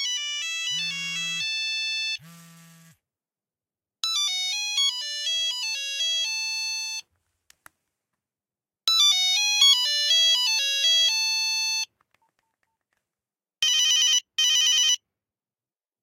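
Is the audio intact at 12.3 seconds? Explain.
Yes, the audio is intact at 12.3 seconds, with no audible fault at that moment.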